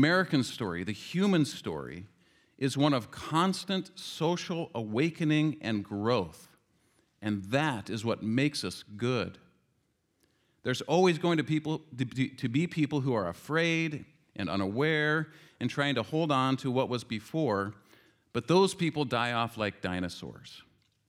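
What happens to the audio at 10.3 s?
At 10.3 s the speech continues intact, with no dropout, click, distortion or other fault at that moment.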